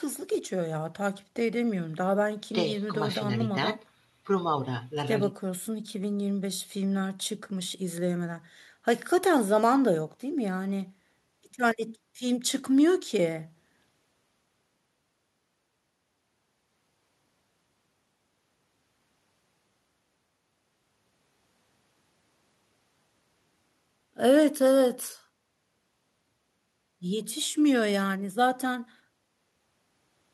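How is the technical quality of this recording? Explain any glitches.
No glitches or dropouts are audible anywhere in the recording, and the signal stays steady and intact throughout.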